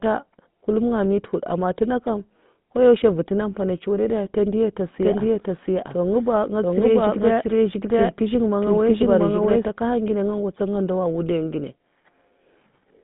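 Throughout, the speech carries the buzzy, gravelly roughness of the GSM full-rate codec, consistent with 13 kbps. Its pulse-driven vocal-tract model coarsens the excitation. A spectrogram shows energy confined to roughly 150 Hz to 3.6 kHz, with nothing above 3.8 kHz.

From 5.02 s to 9.66 s a doubled audio track appears: a second, equally loud full-band copy trails the original by around 0.7 s, likely from a slower capture path mixed back in. The waveform shows overlapping duplicate envelopes starting and stopping abruptly.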